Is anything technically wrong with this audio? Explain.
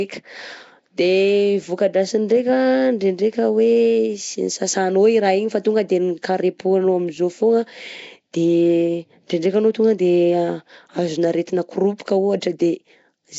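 Yes, two faults are audible. Throughout the speech, the sound has a rough, hissy halo and a smeared, underwater quality, with nothing above 7.7 kHz. This is likely Nellymoser compression, fitting a 32 kbps Flash microphone stream. Fixed two-bit-per-sample coding starves weak bands and fills them with noise. That constant grainy hiss separates it from simple low-pass band-limiting. At 11.98 s, right after "azona aretina", a pre-echo of about 14 ms appears. The quantisation noise sized for the attack spreads back through its block, so a short hiss leads in and softens the onset. Because it sits only before the attack, it is not reverb or an echo tail.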